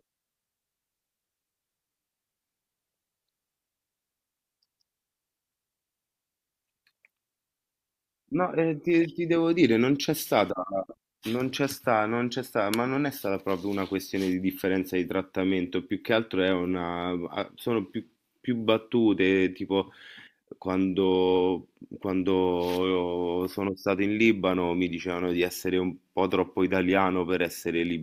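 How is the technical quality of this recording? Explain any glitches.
No glitches or technical faults are audible anywhere in the speech recording.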